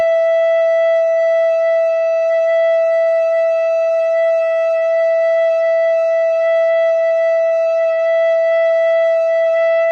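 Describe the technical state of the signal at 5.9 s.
At 5.9 s the music sits inside a stretch of repeated stalls (stutter) running from 5.69 to 6.76 s. Packets reached the receiver late, so its jitter buffer emptied eleven times, and each time it briefly extended the last sound, for about 105 ms in total and no more than 12 ms at once. Unlike dropouts, nothing goes silent or is lost; the passage simply hitches and drags in tiny repeated catches.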